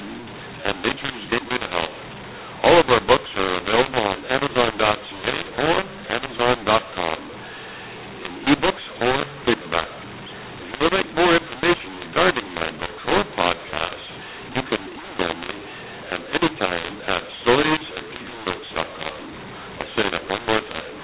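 From start to finish, mu-law and A-law are mixed up: A-law samples are read as mu-law, scrambling levels, giving harsh distortion, a jagged waveform, and noise-filled pauses.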